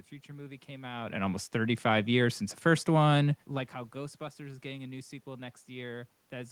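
No technical faults can be heard in the signal chain: the background noise belongs to the room itself, and the level changes around one second and again near three and a half seconds come from the talker's distance to the microphone rather than from the system.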